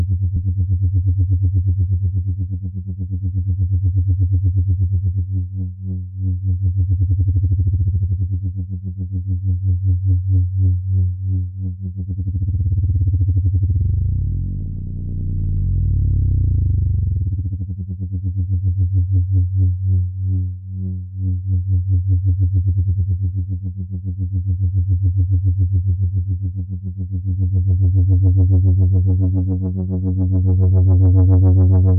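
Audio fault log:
No faults were heard anywhere in the audio. There is nothing to log for any point in the clip.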